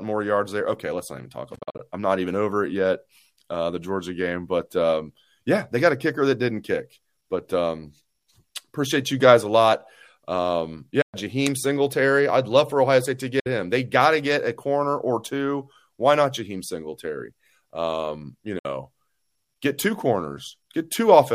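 Speech with Bluetooth dropouts, likely from lost wireless packets: sound vanishes at 1.55–1.80 s (several short gaps, longest 43.5 ms), 11.02–11.14, 13.40–13.46 and 18.59–18.65 s, then resumes as if it had played on. The waveform shows flat holes, and the spectrogram shows blank full-band columns.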